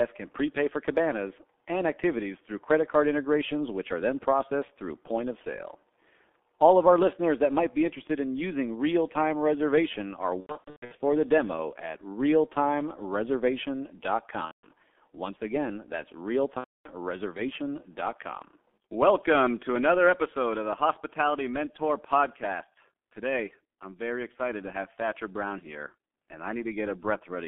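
The whole clip is speech carried through the G.723.1 codec at a low rate, which fits about 6.3 kbit/s. The line band runs from 250 Hz to 3.5 kHz. Nothing above that survives. The codec's damage is heavy. It models the voice in coarse 30 ms frames and updates slowly. So the speech sounds muffled and hoarse. Consonants smear into each other. Low warmth is also thin.

From 10.41 to 11.01 s there is VoIP packet loss concealed by the speech codec. About 420 ms of audio is missing, scattered over 600 ms. The longest gap is 120 ms. The decoder fills each hole by repeating its last pitch and filter at falling gain. This gives a buzzy, fading tone. Recovery is sluggish afterwards. The same concealment returns from 14.45 to 14.68 s, covering 180 ms. It comes again from 16.58 to 16.90 s, covering 270 ms.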